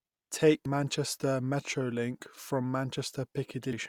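At 0.66 s and again from 3.73 to 3.76 s, the speech briefly glitches, the mark of damaged data in a compressed stream: corrupted bytes make the decoder misread frames and hunt for sync.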